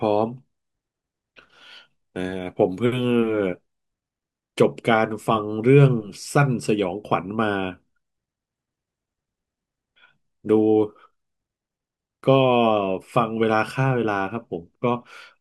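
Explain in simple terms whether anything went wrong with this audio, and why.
Nothing went wrong: no dropouts, glitches or other transmission faults are audible anywhere in the speech.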